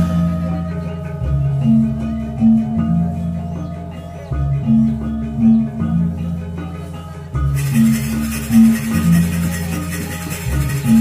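At 4.62 s the sound lurches forward, and at 10.68 s a similar, slightly smaller jump follows. These are compressed frames skipped: whole blocks of encoded audio never reached playback, so roughly 70 ms and then about 50 ms go missing. Those gaps correspond to about three and two frames of roughly 23 ms each.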